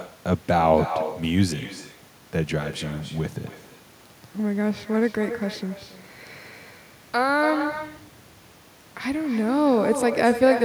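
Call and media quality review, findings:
Echo with no canceller, throughout the speech. Each phrase is followed, roughly a third of a second later, by a copy about 10 dB down that sounds thin. Probable component: far-end loudspeaker-to-microphone path with no echo cancellation, returning over the network round trip. Unlike room reverberation, this is a distinct repeat after a clear gap, not a continuous tail.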